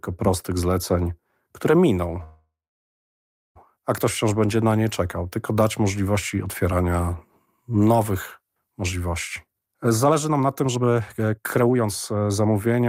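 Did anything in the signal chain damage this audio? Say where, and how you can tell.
Yes. Between 2.23 and 3.57 s, right after "prostych zleceń które miną", the call audio freezes: a brief decaying continuation gives way to about 1.02 s of silence, then speech resumes at "a ktoś wciąż będzie". Nothing is lost, but 1.32 s of delay is inserted. This is likely a network stall that drained the jitter buffer.

From 9.45 s to the end, after "możliwości otwierania nowych możliwości", a jitter buffer speed-up is audible. Speech runs at about 137% speed with unchanged pitch and sounds hurried. The receiver is trimming pitch-period-sized slices, around one and a half seconds in total, to shed the backlog.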